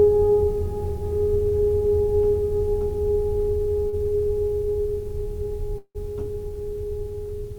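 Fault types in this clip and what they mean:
Short stall from a late packet: at 3.89 s a late packet drained the jitter buffer, so the music is stretched for 34 ms, then resumes with nothing lost.
Call audio freeze: from 5.78 to 5.97 s the music is held for 168 ms as a fading continuation ending in 60 ms of silence, likely delayed packets; playback then resumes intact.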